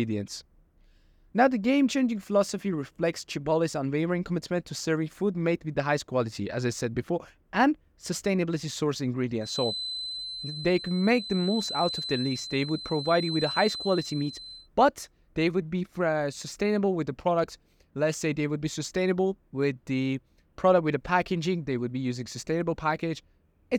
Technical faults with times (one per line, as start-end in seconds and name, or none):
9.38-14.69 feedback whistle